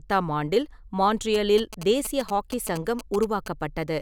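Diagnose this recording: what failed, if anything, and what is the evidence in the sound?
GSM signalling bursts entered the analogue wiring from 1.34 to 3.48 s: a galloping dit-dit-dit of short buzzes at 217 Hz, roughly 10 dB below the speech. Nearby phone bursts were rectified by the audio circuit, showing as clustered spikes in the waveform and 217 Hz harmonic stripes in the spectrogram.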